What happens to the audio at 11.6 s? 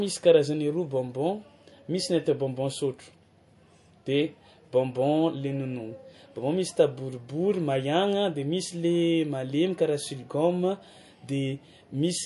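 At 11.6 s the speech sounds watery and swirly with dull treble, as it does throughout, likely MP3 compression at around 48 kbps cutting everything above 11.3 kHz.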